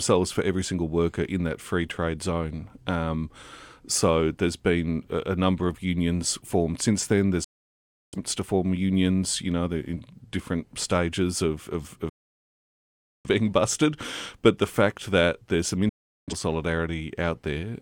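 The receiver three times lost the digital stream and muted until clean frames returned, a digital broadcast dropout. The speech snaps to silence at 7.44 s for 0.68 s before "to form unions you", at 12.09 s after "different stages of of" for 1.15 s, and at 15.89 s after "fact that there's some" for 0.38 s. Those stretches are missing.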